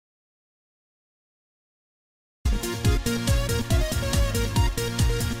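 The input feed was likely lost, through a disconnected device, failed link or stray mute, while recording continued, producing an audio dropout to silence already under way at the start. From 0.0 to 2.45 s there is silence with no room tone, then the sound enters abruptly mid-flow.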